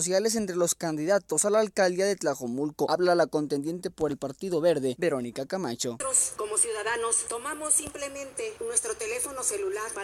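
Nothing in the audio points to a technical fault anywhere along the signal path.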